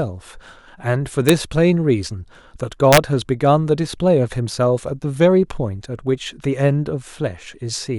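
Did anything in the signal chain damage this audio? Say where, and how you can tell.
Yes. Integer overflow damaged this speech at the sample-format or fixed-point gain stage. Two violent cracks stand out. One hits at 1.29 s. A longer one runs from 2.93 to 2.98 s. Both sit on loud peaks pushed only about 1 dB and about 2 dB past full scale. The integer math wrapped instead of saturating. Those samples jumped to the opposite extreme, which explains the sharp snap rather than a clipping buzz.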